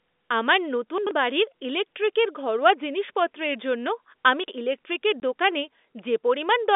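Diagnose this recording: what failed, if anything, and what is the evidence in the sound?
Two things went wrong here, both in how the audio blocks were delivered rather than in the telephone coding.

The first is chunks out of order, at the buffer or driver stage. Around 0.98 to 1.11 s a block of roughly 43 ms plays two chunks late, and again around 4.44 to 4.52 s one block lands one chunk late. Nothing is missing, but the speech briefly jumbles at the hard joins where a late block gets spliced in after material that should have followed it.

The second is packet loss filled with silence, out on the network. At 5.20 s there's a 20 ms hole where the audio just drops to nothing, with hard edges on both sides. That length points to a single lost 20 ms packet that the receiver replaced with silence instead of concealing. The narrow 250 Hz to 3.6 kHz telephone band from the G.711 A-law path comes through with it.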